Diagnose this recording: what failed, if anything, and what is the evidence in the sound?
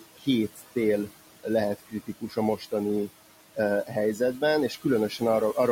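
The failure is in call processing, where the noise suppressor is working hard throughout. The room noise sits about 15 dB below the speech, and the suppressor pulls it down by about 17 dB, so the noise sinks between the words and rises under them. These are noise suppressor artifacts. On a spectrogram, the background shows as patchy, flickering time-frequency cells rather than a smooth floor. In the waveform, the gaps look unnaturally quiet and uneven.

The same suppressor also causes speech cut by the noise suppressor at 0.00–0.27 s, 0.48–0.76 s, 1.78–2.37 s and 2.57–2.72 s. In each span, the speech energy that its frame-by-frame estimate mistook for noise is attenuated by about 15, 11, 16 and 12 dB respectively, so those parts sound swallowed or faint. The spectrogram shows harmonics and consonant energy dropping out in those windows. The waveform envelope dips sharply, which fits gain applied to bands the suppressor misjudged as steady noise.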